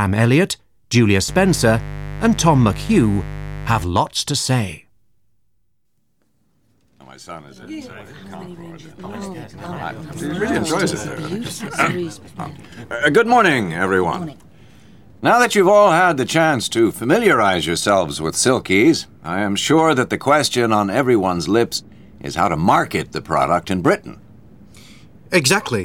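A steady, raspy mains buzz sits fairly loud under the sound from 1.28 to 3.84 s: sharp switching spikes from the 50 Hz supply leaked in, spreading harmonics into the kilohertz range.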